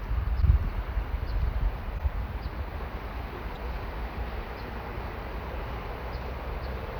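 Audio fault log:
0.41–0.43 s, 1.97–2.00 s, 3.54–3.57 s: broken MP3 bit reservoir, likely. The sound skips forward with a garbled 30 ms glitch, about one 26.1 ms frame, as data missing after a cut frame is decoded from a neighbouring frame's bytes.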